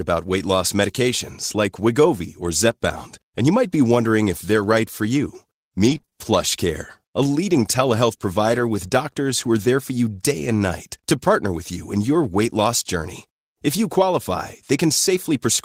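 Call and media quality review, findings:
Brief ticks and small hiccups across 5.85–8.61 s: scattered short gaps, about four, none longer than roughly 20 ms. Jitter buffer or network loss; receiver concealment extended the preceding sound.

Short rougher, noisier patch at 13.95–14.01 s, lasting 40 ms with no dropout: lost packet rebuilt from error correction. Fits two packets replaced by low-bitrate Opus in-band FEC copies.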